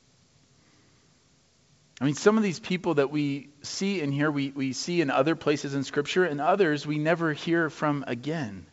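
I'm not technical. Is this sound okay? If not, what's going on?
Yes, it's fine: there's nothing wrong with this speech, and the slightly dull top end is just what a normal internet call sounds like, since the call's G.722 codec keeps nothing above about 8 kHz.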